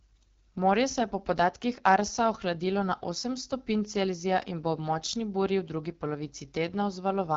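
From start to finish the speech carries the sound of the AMR wideband (HD Voice) codec at a low rate, and the coding damage is plainly audible. The harsh, raspy texture points to one of the two lowest modes, consistent with about 8.85 kbit/s, where the pulse-driven vocal tract model has too few bits to track the voice. Nothing is heard above roughly 7.2 kHz, and the top band sounds like synthetic noise rather than real detail.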